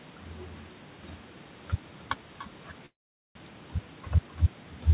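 Because no echo canceller is active at the far end, the loudspeaker output there is picked up by the microphone and returned over the network. Throughout the clip, the speech is trailed by a faint, thin copy arriving roughly 0.3 s later, sitting about 32 dB below the direct sound. It is quiet, but it adds a ghostly doubling behind each phrase. The band-limited call audio, with nothing above 4 kHz, makes that copy sound even thinner.

From 2.86 s to 3.39 s, audio stops arriving at the receiver, most likely because of a long network dropout. The receiver briefly extends the last sound as a fading buzz before giving way to about 0.44 s of silence. When the sound resumes, the lost portion is simply gone, leaving an audible gap and a jump forward in the speech. The delay through the connection also appears to shift by around a tenth of a second across the event.

From 3.47 s to 4.36 s, a jitter buffer speed-up follows. 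The buffer now holds more audio than it targets, so the receiver trims short pitch-period-length slices over and over to drain the excess. About a tenth of a second is removed, and the speech plays at about 109% speed with its pitch unchanged. It sounds hurried until the stretch ends.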